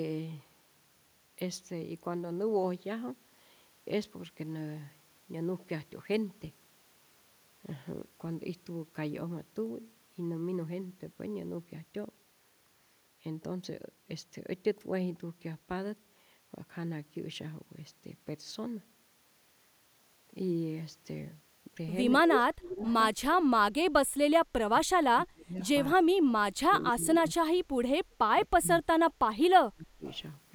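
From 22.23 to 22.86 s the speech drops out in pieces, by around 30 dB at its deepest, for about half a second in total. This is speech suppressed in double talk, likely because an echo canceller heard both sides at once and turned the near talker down along with the echo. On a waveform the envelope collapses into gaps. The same dips return from 24.21 to 26.11 s, from 26.67 to 27.74 s, and from 28.5 to 30.04 s.

Right after the first dip, from 22.87 to 23.23 s, a faint copy of the voice trails about 232 ms behind the original, around 25 dB down. This is echo leak, likely a loudspeaker's output getting past the canceller and being sent back. A shorter scrap appears from 25.63 to 25.69 s, about 35 dB down, and another from 30.07 to 30.19 s, about 30 dB down. On a spectrogram these show as pale, shifted repeats of the preceding harmonic patterns.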